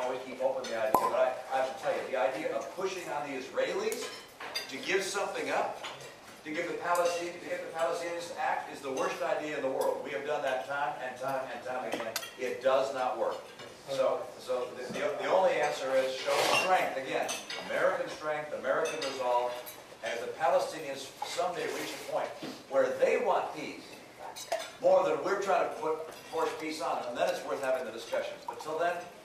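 Throughout the clip, crude rate conversion points to a change from 32 kHz to 44.1 kHz done by linear interpolation with no proper filter. The residual error, roughly 30 dB below the signal, creates inharmonic tones heard as a gritty fizz tracking louder, brighter sound.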